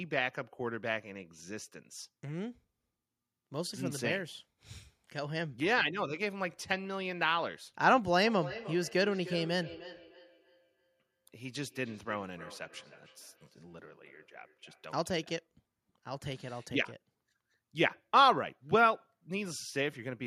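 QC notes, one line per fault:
8.26–15.07 s, feedback echo between two devices: the speech comes back at a steady spacing of roughly 300 ms, peaking about 16 dB below the direct speech. A second device in the same room is replaying this microphone's signal, and the microphone picks it up again. The local echo canceller ignores that sound because its own device didn't play it. A fixed repeat gap with a thinner, ringing tone separates this from room reverberation, which smears the sound without a distinct delay.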